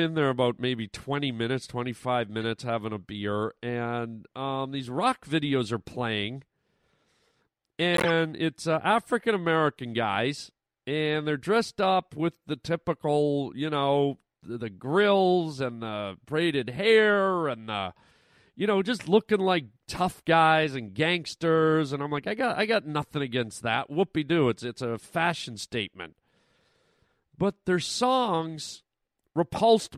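At 2.42 s, 7.94 to 8.10 s and 12.34 s, a corrupt frame decoded: flipped bits made the decoder misplace energy. The first is a faint glitch, the middle a loud multi-frame glitch, the last barely audible. Spectrograms show misplaced bright patches; waveforms, brief spiky bursts.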